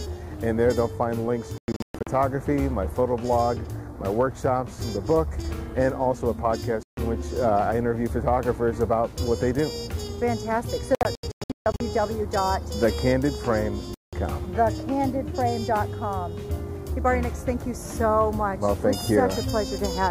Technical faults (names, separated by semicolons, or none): Bluetooth dropout